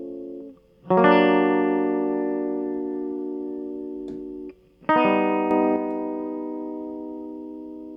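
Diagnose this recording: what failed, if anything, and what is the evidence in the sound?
A sudden gain jump in the digital processing stage: from 5.51 s to 5.76 s the music and its background noise step up together by about 5 dB with no ramp, then drop back. This likely comes from a gain setting applied instantly. A compressor or fade would change level gradually.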